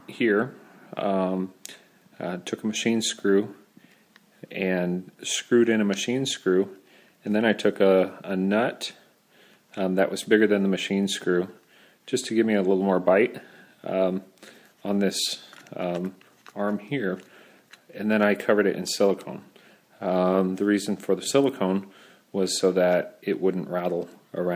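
Nothing in the recording stood out as a technical problem on listening.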